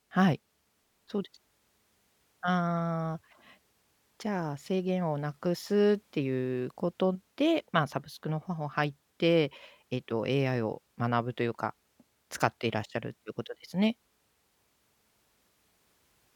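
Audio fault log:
No fault is heard anywhere in this speech clip. Nothing in it calls for an entry in this log.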